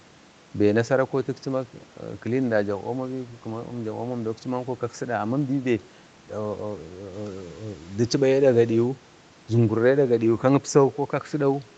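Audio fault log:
Nothing stood out on listening to the speech in this clip.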